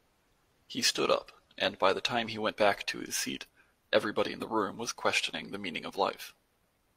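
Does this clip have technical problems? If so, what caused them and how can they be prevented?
No, the speech signal shows no technical faults, so there is nothing to trace to a cause or to prevent.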